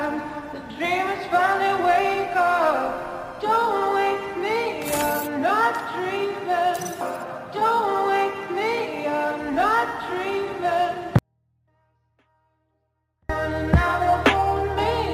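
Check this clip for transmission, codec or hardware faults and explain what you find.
One fault is present: a 24-bit alignment error (too quiet) from 11.19 to 13.29 s. Samples held in the low 24 bits of a 32-bit word were read as full 32-bit integers, so the sound stays clean but drops by about 48 dB, nearly vanishing. The waveform collapses to a thin line, and the spectrogram shows a uniformly faint band with its shape intact.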